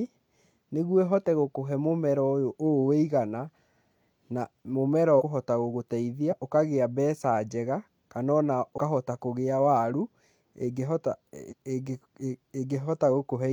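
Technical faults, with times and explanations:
5.16–5.22 s, 6.27–6.34 s, 8.73–8.78 s and 11.47–11.54 s: compressed frames skipped. The speech jumps forward by about 100 ms, 50 ms, 100 ms and 150 ms, matching roughly two, one, two and three lost frames of about 46 ms each. On a spectrogram, formant tracks break abruptly. The waveform envelope shows a sudden discontinuity.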